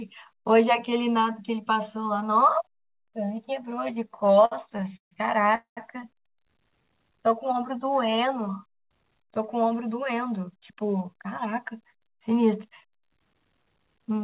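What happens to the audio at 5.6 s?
From 5.55 to 5.79 s the speech stalls in a call audio freeze, likely from packets arriving late and leaving the jitter buffer empty. The receiver stretches the last sound into a fading buzz, then holds about 120 ms of silence before the speech resumes where it stopped, in the same 4 kHz-limited telephone band as the rest. Unlike packet loss, nothing is skipped: a gap is inserted and everything after it plays about 0.21 s later.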